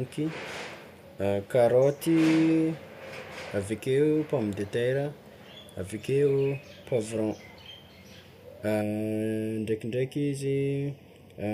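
From 8.82 s to the end at 11.54 s the speech turns hollow and phasey: channel delay (comb filtering). One channel runs about 0.4 ms late, so summing to mono carves regular notches, the first near 1.5 kHz.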